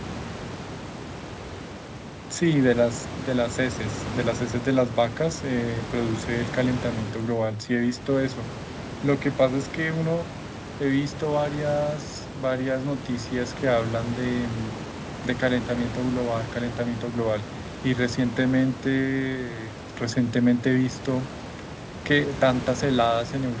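No technical faults occur in this speech, which sits about 13 dB above the room noise and carries nothing above 8 kHz after the call path.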